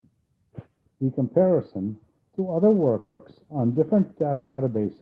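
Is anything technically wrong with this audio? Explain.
Yes, the speech has two call audio freezes, at 2.99 to 3.22 s and 4.32 to 4.61 s. The likely cause is packets arriving late so the receiver's jitter buffer ran dry. The receiver stretched the last sound into a fading buzz for about 200 ms, then 260 ms, and the speech resumed where it stopped, adding delay without losing content. On a spectrogram each freeze shows as smeared, flat horizontal bands continuing the preceding frame and slowly dimming. On a waveform it appears as a repetitive, decaying stretch with no real silence. The call codec's high-frequency ceiling near 12 kHz, which fits Opus at around 20 kbps, is visible as an empty band above it.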